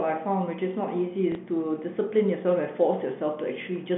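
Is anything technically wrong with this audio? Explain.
Yes. Between 1.32 and 1.35 s the speech has a packet loss with the last packet repeated. About 30 ms of audio never arrived, which fits a single lost packet of that length, and the receiver filled the gap by replaying the packet it already had. The passage comes out as a small blip. The telephone-band G.711 sound, limited to roughly 150 to 3400 Hz, runs through it.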